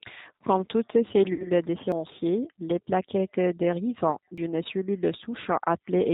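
Speech throughout sounds rough and slightly synthetic, with nothing above 4 kHz, the plainly audible mark of the 8 kbit/s G.729 codec rebuilding the voice from a coarse filter-and-pulse model. From 1.33 to 1.51 s the sound smears into a fading buzzy tone or coloured noise and stays weak or distorted afterwards: VoIP packet loss concealed by the speech codec, about 60 ms missing, which fits three lost packets. At 1.92 s and 4.38 s the audio briefly skips, losing a few tens of milliseconds, likely from audio missing between chunks recorded every 2.5 s.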